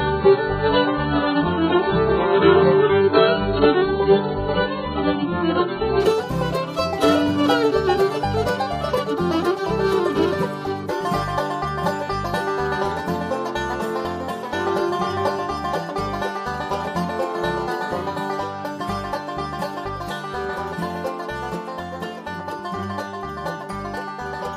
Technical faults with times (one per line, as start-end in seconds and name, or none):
0.00-6.00 adaptive stream starting at a low bitrate